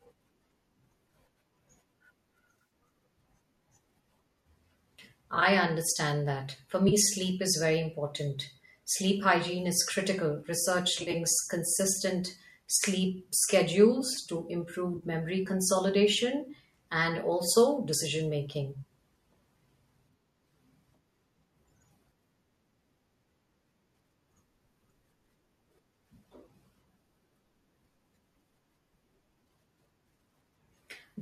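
AAC frame loss with concealment hits this speech clip at 2.55, 5.35, 6.89, 10.96, 12.76 and 14.97 s, for example right after "hygiene is critical". Each time, 30 to 90 ms of audio went missing, and the decoder patched the gaps from the last good spectrum, leaving brief smeared, phasey spots. The short frames suggest likely low-delay AAC.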